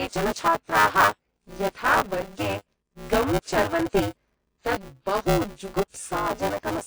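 A speech recording in which the writer and the hardware reading its ring buffer have slipped out of step, so they cross inside every period. This is buffer tearing: roughly a third of each buffer replays audio from about 15 ms earlier, butted against the fresh sound with hard joins, giving a robotic 200 Hz buzz that runs the whole length of the clip and is there only while speech is present. On top of that, the audio has likely been through WMA compression at a low bitrate, consistent with roughly 32 kbps. Its long transform blocks smear quantisation noise across tens of milliseconds and discard weak content, leaving a plainly audible ringing, washy quality with hiss that swells and fades with the speech.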